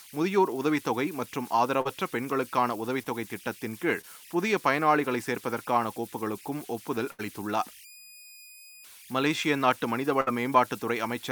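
A steady whistle around 3 kHz runs through the pauses of the recording, and the quieter passages of speech carry a grainy texture, with the error sitting about 23 dB below the signal. These are converter idle tones. A delta-sigma converter without dither, fed a small input, settles into repeating bit patterns, and those patterns emerge as a fixed pitch rather than as smooth noise.

At 1.81 to 1.87 s, 3.03 to 3.07 s and 4.01 to 4.05 s the speech briefly smears or wobbles. Each is a short concealed packet loss: 40, 20 and 20 ms of audio never arrived in time. The receiver papered over them by extending the preceding sound for 36, 23 and 16 ms before blending back into the real stream.

Two longer holes follow, at 7.11 to 7.21 s and 10.21 to 10.29 s. In each, the last sound hangs on and fades rather than continuing naturally, and the speech then picks up slightly further along. This is a burst of packet loss: roughly 80 ms and then 60 ms went missing. 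Concealment stretched the prior audio across 78 and 60 ms while turning it down, so whatever fell inside those gaps is simply gone.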